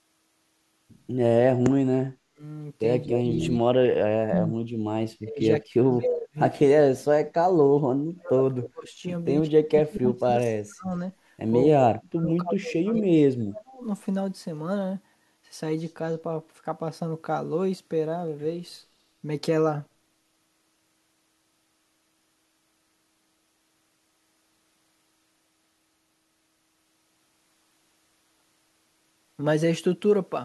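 Speech suppressed in double talk occurs at 2.04–2.42, 3.07–4.56, 5.16–8.99, 9.67–10.9 and 11.72–13.85 s. The speech sinks or cuts out in pieces, falling at most by about 40 dB. The likely cause is an echo canceller treating overlapping far-end talk as echo. Unlike packet-loss dropouts, the level ducks in step with the overlap rather than leaving brief, clean gaps.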